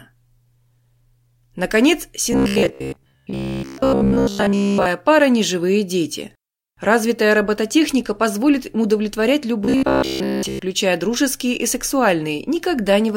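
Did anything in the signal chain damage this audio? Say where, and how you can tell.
Yes, robotic sound from repeated short buffers at 2.33–4.86 s (ending before "пара ни живые дети") and 9.62–10.62 s (after "робототехника позволит им удовлетворять", before "дружеские и"). A rigid 66.7 Hz buzz points to a 15 ms block replayed through most of each span, likely a driver or buffer underrun. A spectrogram shows evenly spaced harmonic lines, and the waveform shows identical repeating cycles.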